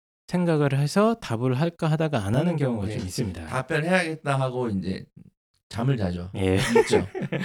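From 2.34 s to the end of the speech, the sound turns rough and slightly doubled. This is channel delay, heard as comb filtering. One channel arrives late, by roughly 20 ms, and the two channels are summed to mono. The content shared by both cancels at evenly spaced frequencies. The first notch sits very low, near 20 Hz, and more follow at regular steps. With a delay this long, the voice sounds rough and slightly doubled.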